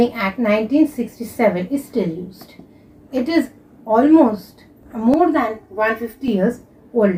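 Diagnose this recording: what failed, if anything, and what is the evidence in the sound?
Channel delay (comb filtering) hits from 5.14 to 6.28 s, where the sound turns hollow and phasey. One channel is running roughly 3 ms late, probably a buffer slip, and the mono sum cancels at evenly spaced notches starting somewhere near 200 Hz.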